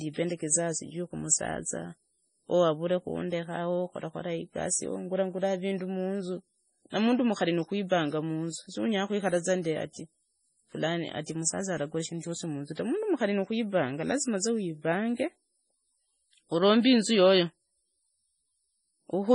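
From start to finish the speech sounds watery and swirly, with metallic chirps on s sounds, smeared consonant attacks, and nothing at all above 10.5 kHz. This is likely heavy MP3 compression, with damage that fits a very low bitrate near 24 kbps. Starved of bits, the encoder cut the treble at a fixed frequency and zeroed weak frequency lines, which flicker on and off from frame to frame and produce the swirling texture.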